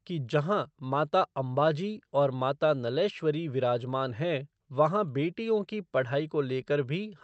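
This speech recording shows no technical faults, having passed through a WebRTC call path whose Opus coding leaves the audio band-limited to about 8 kHz.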